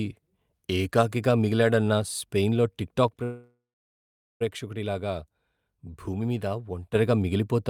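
A gain setting was likely applied in a single step with no ramp at 3.08 s, right after "ఏకాకిగా మిగిలాడన్న స్పెయిన్లో", producing a sudden gain jump. The level drops by about 5 dB from one sample to the next, and the speech and its background noise fall together. The lower level holds until 6.95 s, where the gain steps back just as abruptly.

Just after that, at 3.23 s, packets were likely held up in transit and the jitter buffer ran dry, causing a call audio freeze. The receiver stretches the last sound into a fading buzz or hiss before settling into silence for about 0.79 s. The stall lasts until 4.43 s, roughly 1.17 s in all, and the speech then resumes where it stopped. Nothing is lost, but everything after it arrives that much later.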